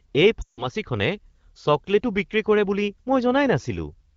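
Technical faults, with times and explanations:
0.42 to 0.66 s, lost AMR speech frames: about 160 ms, fitting eight 20 ms frames, was concealed by reusing the last pitch and vocal tract settings at falling gain, so the sound drops to near silence within two frames. The spectrogram shows frozen harmonics dimming to a gap; the waveform shows a tapering envelope.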